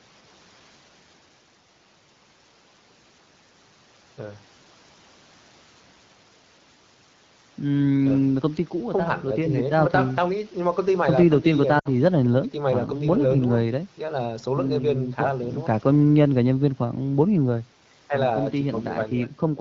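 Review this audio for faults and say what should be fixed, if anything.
Lost AMR speech frames, 11.79 to 11.89 s: about 60 ms of speech, which fits three 20 ms frames, failed the checksum after radio errors. The AMR wideband decoder, running at 12.65 kbit/s, stood in for them by repeating the last good pitch and vocal tract settings at falling gain. The sound drops to near silence within two frames, then the speech returns weak or rough for a moment. Improving radio coverage or link robustness would prevent these frame losses.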